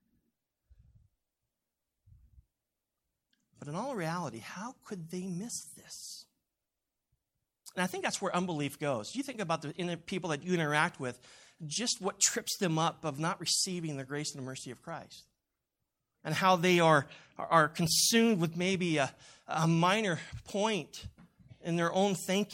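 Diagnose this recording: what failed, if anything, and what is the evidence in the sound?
Nothing failed; no stage leaves any audible fault.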